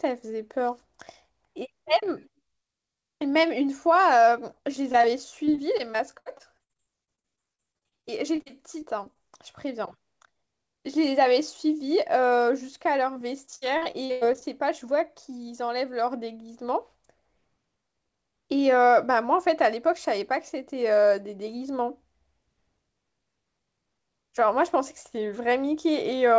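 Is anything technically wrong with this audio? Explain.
Yes. The speech has packet loss problems.

Short concealed packet loss occurs at 4.92 to 4.95 s and 5.01 to 5.05 s. About 20 ms went missing each time. Concealment extended the preceding sound, leaving a brief smear or wobble.

Repeated packet loss causes robotic sound from 5.45 to 9.17 s and 13.13 to 14.43 s. Gaps recur constantly, up to 63 ms and 98 ms. Continual patching, covering about a fifth and then over a quarter of each stretch, makes the speech choppy.

The call path itself carries nothing above 8 kHz, which fits a 64 kbps G.722 codec.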